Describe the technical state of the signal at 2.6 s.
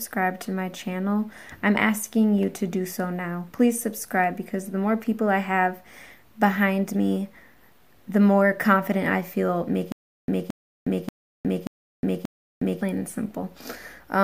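The signal at 2.6 s is intact, with nothing audibly wrong at that moment.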